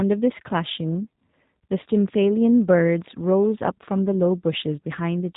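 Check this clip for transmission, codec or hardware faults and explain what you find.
One fault runs through the entire speech clip: G.729 codec coding, plainly audible. The codec rebuilds speech from a vocal tract filter, a pitch predictor and a few sparse pulses per frame, which fits an 8 kbit/s G.729A stream. The result sounds rough and slightly synthetic, with a muffled top. On a spectrogram, energy stops sharply near 3.8 kHz and harmonics look smeared. The waveform looks smoother and less detailed than the original speech.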